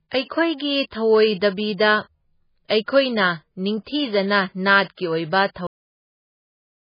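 Right from the start the speech has that heavily squeezed, watery quality, with a swirly shimmer on the consonants and s sounds turning into metallic chirps. Nothing gets through above about 5.1 kHz, so the top end is just gone. The likely cause is MP3 compression at a very low rate, which fits something around 16 kbps. At that rate the encoder chops the treble at a fixed point and lets weak frequency lines blink on and off from frame to frame, which is where the swirl comes from.

Three attacks have pre-echo on them: one from 0.90 to 0.92 s, one at 2.68 s and one at 2.86 s, each spread over roughly 17 to 20 ms. In each, a short hiss creeps in just before the onset and the hit itself sounds blunted. The codec spreads its quantisation noise across a whole block, so when a sharp attack lands late in the block, noise sized for the loud part also fills the quiet stretch ahead of it.

The clip also has a cut-off end. 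At 5.67 s the audio stops dead in the middle of a sound and drops straight to digital silence, with no decay at all. The final buffers were never written or played out, so the tail of that sound is simply missing, and the clip stays silent through to the end.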